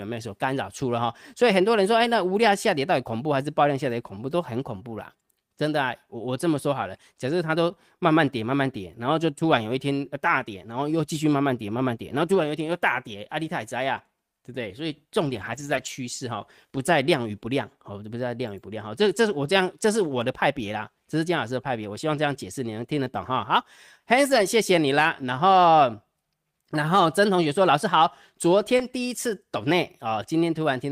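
Speech, carrying several stretches of lost packets rebuilt from error correction: brief rough, noisier patches at 9.51, 13.97, 17.05, 20.07 and 28.79 s, a longer one from 24.29 to 24.39 s, and the longest from 15.25 to 15.87 s. Unlike a dropout, there is no gap. The receiver played a low-bitrate backup copy of each missing stretch, so the audio keeps going but sounds coarser. From 28.77 to 28.81 s there is also short concealed packet loss. Here no backup copy arrived, and the decoder stretched the preceding sound forward before blending back. That leaves a brief smear or wobble rather than the grainy texture of the rebuilt stretches.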